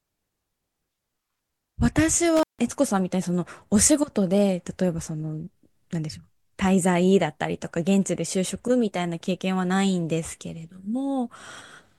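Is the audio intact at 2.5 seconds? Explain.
No. An intermittent contact hits the speech between 2.36 and 2.59 s. A loose cable or plug briefly breaks the circuit, and the line stays open for about 158 ms. The sound drops out, leaving faint hiss, with crackle at both edges.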